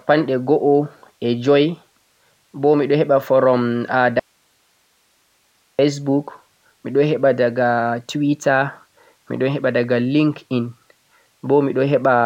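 At about 4.2 s the speech just drops out, an audio dropout to a faint residue lasting roughly 1.59 s, until it snaps back at 5.79 s. The gap holds only hiss, far down, about 45 dB below the voice, so the path after the break likely stayed live while the signal itself was lost.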